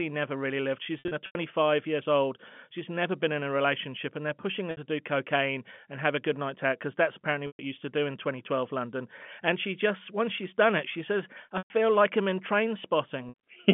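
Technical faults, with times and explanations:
0.99–1.35 s, 4.71–4.77 s, 7.47–7.59 s, 11.58–11.70 s, 13.29–13.34 s, packet loss with pitch repetition: lost packets, 180 ms scattered at first, then 60–120 ms, were bridged by repeating the last pitch period, giving briefly held, buzzy sound through the narrow telephone band.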